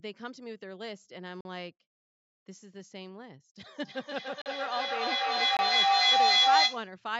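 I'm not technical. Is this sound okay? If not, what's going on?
No. Blocks of digital silence at 1.41, 4.42 and 5.57 s: the sound drops out abruptly for about 40, 40 and 20 milliseconds, probably because the program didn't deliver audio in time. Feedback howl from 3.74 to 6.98 s: two devices in one room on the same call keep re-amplifying each other, building a howling tone around 700 Hz, with the sound going round the loop roughly every third of a second.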